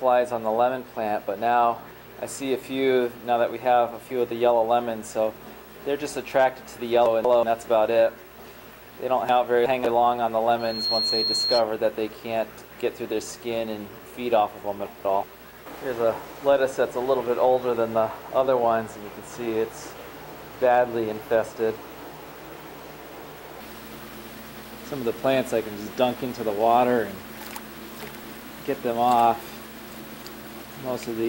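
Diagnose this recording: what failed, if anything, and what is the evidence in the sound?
Chunks out of order, at the buffer or network stage: 7.06–7.43, 9.29–9.85, 14.86–15.23, 27.86–28.42 and 29.91–30.28 s. A block of about 186 ms plays one or two blocks late, giving jumbled moments. Unlike dropouts, no audio goes missing.

Loudspeaker feedback squeal, an acoustic loop between capture and playback: from 10.59 to 11.63 s a single 4.2 kHz tone swells over roughly a third of a second to about the level of the sound. That self-building swell distinguishes it from steady tonal interference.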